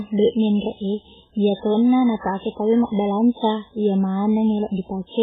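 From start to finish the speech sounds dull and boxy, with nothing above about 3.8 kHz, and two kinds of coding damage heard at once: a coarse, warbly smearing and a separate swirly, metallic shimmer on top. The cause is likely transcoding between lossy codecs. A very low-rate MP3-like pass, around 8 kbit/s, set the low cut-off, and a later HE-AAC-style pass near 24 kbit/s re-encoded that damage and added its own.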